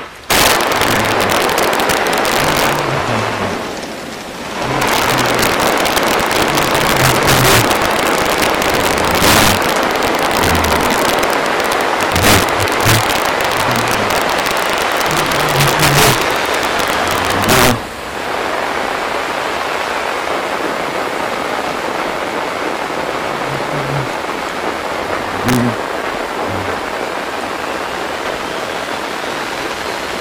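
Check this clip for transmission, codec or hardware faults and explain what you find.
The clip has one fault, integer overflow, present throughout its length. The signal is driven about 9 dB past the largest value the integer format can hold, and instead of being limited there, the samples wrap around to the opposite extreme. Only the loudest peaks, somewhere around one or two percent of samples, cross that limit, so the fault comes as violent, sharp cracks on loud moments. Clipping would flatten those peaks into a duller buzz rather than throwing them across the full range.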